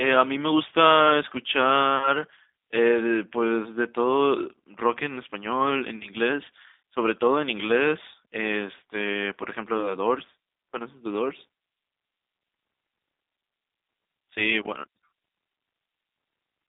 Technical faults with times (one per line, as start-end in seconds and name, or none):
0.00-16.68 G.729 codec